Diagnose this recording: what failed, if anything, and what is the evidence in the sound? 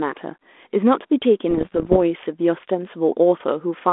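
What failed is the transmission link: bit errors on an ADPCM link, heard between 1.50 and 1.98 s as a cluster of pops and rough, gritty bursts with brief jumps in level over the speech. The band-limited 32 kbit/s G.726 coding itself carries through unchanged. Each flipped bit upsets the decoder's step size and predictor, so each hit rings on for some milliseconds before settling, with a bit error rate somewhere under one percent. Packet loss would instead leave silent gaps or repeated fragments, not this smeared, level-jumping roughness.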